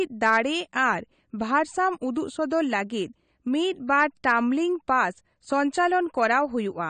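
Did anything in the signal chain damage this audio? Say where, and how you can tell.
Yes, the damage is at the codec stage. The whole clip has AAC compression artefacts that are plainly audible. Nothing comes through above 9 kHz, so the speech sounds dull, with a smeared, warbly texture on sibilants and held sounds. That hard cut-off and the thinned spectrum are what a transform codec does when it's short of bits, and the likely cause is AAC-LC at a low rate, something like 32 kbps.

There's also a pre-echo at 2.50 s. A short hiss, spread over about 13 ms, sneaks in just ahead of a sharp attack, and the onset itself comes across softened. That's the same codec at work. The attack landed late in a transform block, so the quantisation noise sized for the loud part got smeared evenly across the whole block, including the quiet stretch before the attack.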